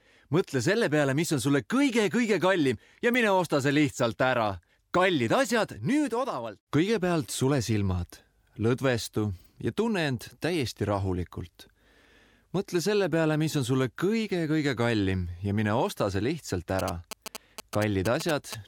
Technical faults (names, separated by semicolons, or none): GSM signalling bursts